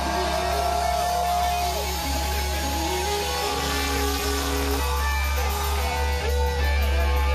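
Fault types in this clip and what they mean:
overlap-add ripple: The audio was split into windowed frames and rejoined with windows that fail to sum to a steady gain, so the level dips by about 60 dB once per frame, around 300 Hz, producing a metallic buzz with extra tones around each note from 3.47 to 4.80 s.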